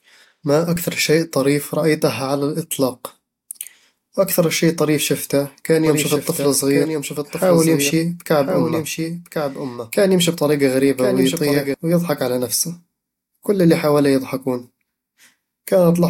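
From 5.86 to 11.74 s, after "شي طريف شفته كان", a doubled audio track appears. A copy about a second late, roughly 5 dB quieter, runs underneath until "ويضحك على نفسه". It likely comes from a second, slower capture path.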